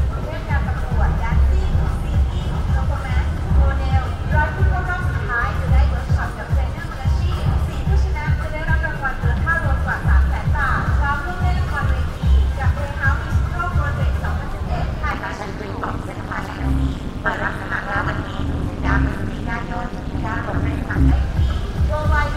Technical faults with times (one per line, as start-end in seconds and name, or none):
15.11-21.11 overlap-add ripple